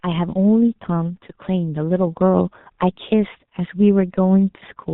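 Throughout, the speech carries heavy G.723.1 codec damage: nothing survives above 4 kHz, consonants smear, and the voice sounds muffled and hoarse, which fits a rate near 6 kbit/s. On a spectrogram the energy stops at a flat ceiling, with coarse blocky detail. At 2.07 s the microphone volume is stepped up: the input gain jumps about 4 dB at once, voice and background together, and the waveform envelope widens abruptly there.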